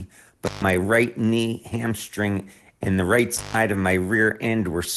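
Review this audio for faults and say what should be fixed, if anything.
Intermittent contact at 0.46 to 0.64 s, just before "right knee hamstring and", and at 3.37 to 3.56 s, just after "hamstring and the right". A loose plug or cable briefly breaks the circuit. The sound drops out for about 142 ms and 147 ms, with crackle where the contact opens and closes. Reseat or replace the connector and cable at the microphone end.

Lost packet rebuilt from error correction at 3.73 to 3.75 s. One 20 ms packet went missing, and the decoder filled it from the rougher low-bitrate copy carried in the following packet. There is no gap, but that stretch sounds coarser and noisier than the Opus call audio around it, which is band-limited near 12 kHz in a way that fits roughly 24 kbps. Steadier network conditions, such as a wired connection, would prevent the loss.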